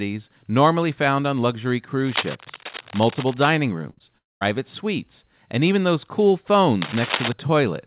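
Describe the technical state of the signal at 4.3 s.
At 4.3 s the signal is inside a gap from 4.18 to 4.43 s, likely a long network dropout. The receiver stretches the last sound into a fading buzz that decays to near silence, and audio resumes at "suites and even those", band-limited to 4 kHz by G.711.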